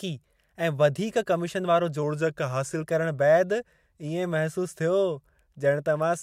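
A short speech recording drops abruptly in pitch and pace from 2.03 to 2.83 s, slowing by about 5.9% and sinking about 105 cents, roughly a semitone, before snapping back. This is likely a drift correction step, where clock-matching software briefly altered playback rate to rebalance its buffer.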